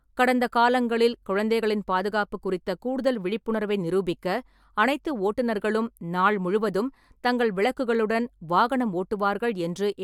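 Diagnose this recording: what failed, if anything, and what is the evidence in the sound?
Nothing failed here; listening through the speech, there's no stage in the chain that leaves any trace worth flagging.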